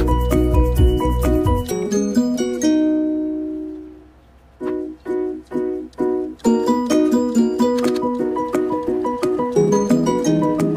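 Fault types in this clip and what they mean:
Time-stretched section: From 7.89 s to the end at 10.77 s the sound suddenly runs about 1.35 times faster while its pitch stays put, so the pace lurches forward and the audio turns rushed. This is likely software compressing that stretch into less time, keeping the original pitch by discarding short slices of the waveform and butting the remaining pieces together.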